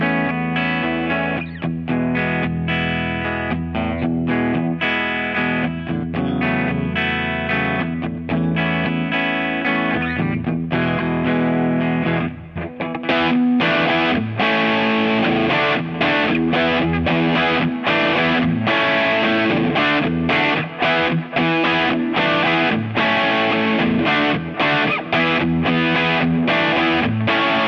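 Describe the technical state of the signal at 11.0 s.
At 11.0 s the signal is intact, with no dropout, distortion, glitch or other fault to be heard.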